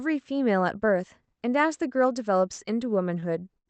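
A speech clip, heard through an Opus call path with sound up to about 8 kHz, with four short stalls from late packets. They fall at 2.53–2.60 s, 3.20–3.24 s, 3.54–3.58 s and 3.58–3.68 s. Each time, a packet arrived late and the jitter buffer ran dry. The receiver stretched the last sound for 47, 18, 20 and 78 ms, then resumed. Nothing is lost. The sound just hangs briefly, with a faint buzz or dip.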